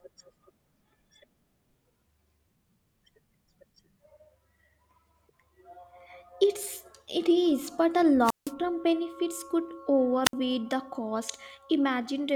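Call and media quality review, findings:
Wireless microphone squelch dropout, 8.23–8.53 s and 10.24–10.33 s: analogue FM RF link fading, receiver squelch muting output. Brief hiss rise, then near-silent holes of 164 ms and 62 ms, speech resuming after each. Check antenna placement, line of sight, transmitter battery.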